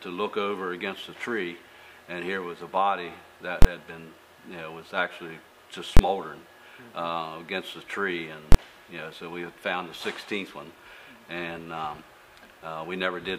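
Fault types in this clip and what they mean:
Invalid numbers at full scale: A calculation produced infinite or invalid values, and the output was forced to the largest positive or negative sample value for a whole processing block. Here it happens three times, at 3.62–3.65 s, 5.97–5.99 s and 8.52–8.55 s. Each lasts about 23 ms, which fits a 1024-sample block. Because the blocks are this short, each is heard as a single hard bang rather than two separate pops with a gap between them.
DAB burbling: Weak DAB reception let bit errors get past the error correction into the MP2 audio data. Corrupted samples put short blips of noise into single sub-bands. In this clip it appears once, from 6.99 to 7.11 s, as a short burst of damage. The 120 ms span fits about five consecutive damaged frames, and the error rate behind it is very low, well under a tenth of a percent.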